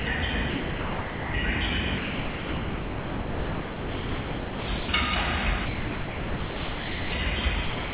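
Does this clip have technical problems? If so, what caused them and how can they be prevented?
Yes. The sound drops out and is replaced by steady comfort noise at 0 to 0.06 s, 0.5 to 1.34 s, 1.98 to 4.68 s, 4.78 to 4.88 s, 5.66 to 7.12 s and 7.64 s to the end. The likely cause is the sender's voice detector classing this non-speech sound as background and pausing transmission. Disabling voice activity detection for non-speech content would prevent these dropouts.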